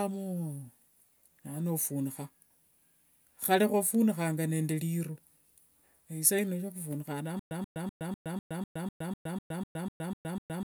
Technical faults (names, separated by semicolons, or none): stutter with silent gaps